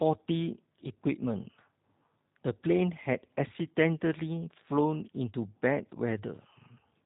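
Throughout the speech, the sound is narrow and boxed-in, with nothing above about 3.8 kHz, and it has a plainly audible rough, synthetic grain, as though each syllable were assembled rather than recorded. That is the signature of G.729 codec damage. The codec models speech with a vocal tract filter and a pitch predictor and spends only a few pulses per short frame on the rest, which fits an 8 kbit/s G.729A stream.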